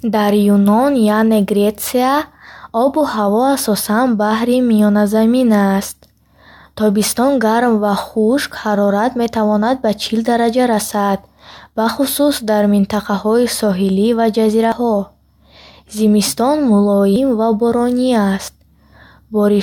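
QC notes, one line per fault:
14.72 s: dropped buffer (overrun). The speech jumps forward, skipping roughly 70 ms with no gap of silence. Likely the input wasn't read in time and that stretch was overwritten.
17.16 s: dropped buffer (overrun). The same jump, this time losing about a tenth of a second, where the two sides butt together.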